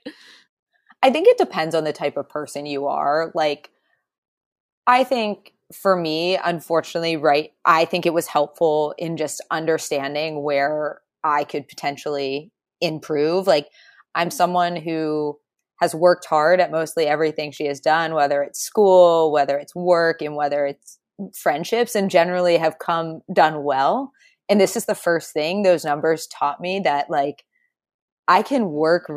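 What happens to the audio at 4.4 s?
Nothing goes wrong at 4.4 s: the speech runs through that moment without any audible fault.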